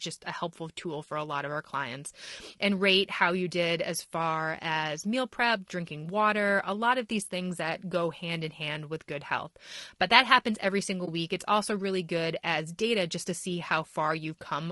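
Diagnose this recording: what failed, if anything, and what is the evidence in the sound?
Low-delay AAC compression, present throughout the speech: the codec stage is the fault. The voice sounds rough and grainy, with noise filling the gaps between harmonics and a thin, synthetic top band. The short analysis frames resolve pitch poorly, and the damage fits a likely AAC-ELD encode at around 32 kbps.

AAC frame loss with muting, from 11.05 to 11.08 s: a network or transport fault, concealed at the decoder. A brief dip of about 20 ms opens in the speech, which fits one lost frame whose spectrum was zeroed, the overlapping windows fading the sound out and back in.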